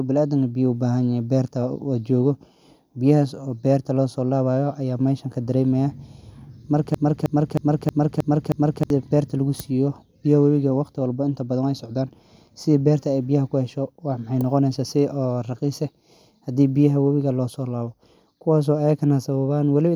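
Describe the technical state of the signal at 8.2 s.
At 8.2 s the speech is caught in a broken-record loop running from 6.94 to 8.90 s: one 315 ms fragment repeats exactly, six times back to back. The likely cause is a stalled player or stream resending its last buffered piece, so the intended audio there is lost.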